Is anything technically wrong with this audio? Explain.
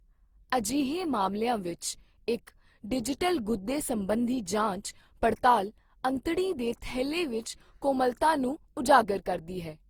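Yes. Throughout the speech there is generation loss: a swirly, hollow, smeared quality with blurred consonant onsets, most likely from repeated lossy re-encoding, around seven passes of something like Opus at 48 kbit/s. A spectrogram shows a cut-off near 20.4 kHz.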